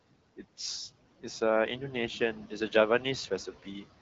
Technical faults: noise suppressor artifacts

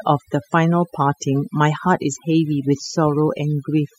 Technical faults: overdone noise removal

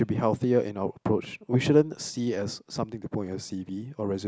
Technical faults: none

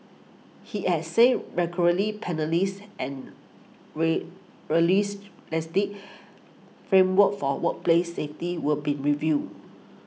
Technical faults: none

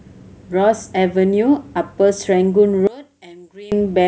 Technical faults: one channel inverted

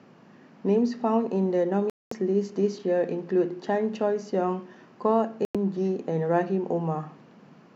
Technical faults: digital broadcast dropout

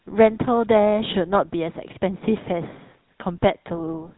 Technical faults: GSM full-rate codec

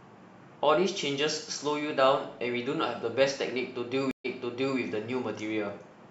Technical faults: stream reconnect

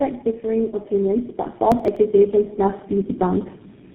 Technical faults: tandem speech coding; processor overload crackle

